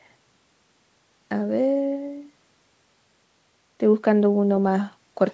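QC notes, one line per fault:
Nothing to flag here, just ordinary call audio that went through the usual microphone processing and a WebRTC call path using G.722 at 64 kbps, so the top end stops around 8 kHz, as you'd expect for that setup.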